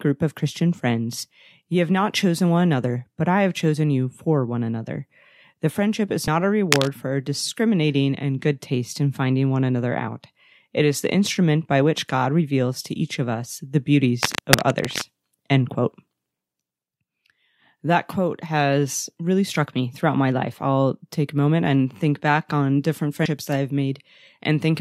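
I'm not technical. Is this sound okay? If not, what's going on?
No, there are two kinds of problem. At 6.27 s and 23.25 s the speech jumps forward. These are compressed frames skipped: chunks of the compressed file were missing or rejected as damaged, so playback leaps ahead, about a twentieth of a second the first time and a tenth the second.

From 6.69 to 6.88 s, and again from 14.23 to 15.02 s, a rough scratching or rustling sits over the speech. The first burst is about as loud as the speech and the second a little quieter. This is cable scratch noise, likely from a worn cable, plug or control being moved and making an unsteady connection.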